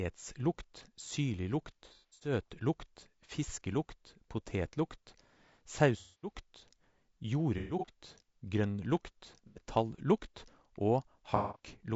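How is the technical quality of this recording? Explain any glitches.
The technical quality is poor: the speech carries constant codec roughness, and five separate dropouts break it up.

Throughout, the voice sounds rough and grainy, with noise filling the gaps between harmonics and a thin, synthetic top end. This is likely low-delay AAC compression (AAC-ELD) at a bitrate that sounds like around 32 kbps. Its short frames resolve pitch harmonics poorly.

AAC frame loss with concealment occurs at 1.85–2.32 s, 5.99–6.32 s, 7.58–7.92 s, 9.47–9.61 s and 11.36–11.59 s. In each, the decoder patches missing frames from the last good spectrum, giving smeared, noisy, phasey stretches. The first and third losses are scattered, with runs up to about 100 ms.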